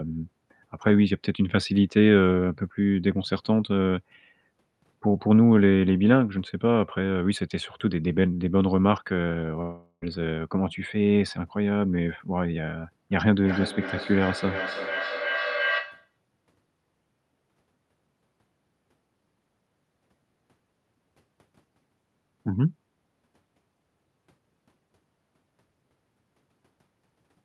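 Speech carried over a call path with audible Opus-style coding noise has two faults. From 9.61 to 10.04 s the sound smears into a fading buzz for about 0.4 s, then briefly goes silent, and roughly 400 ms of speech never returns, likely a long network dropout with the receiver concealing the gap. From 13.11 to 16.16 s a feedback echo between two devices repeats the speech about every 0.3 s, reaching about 6 dB below the direct speech, thinner and more ringing with each pass.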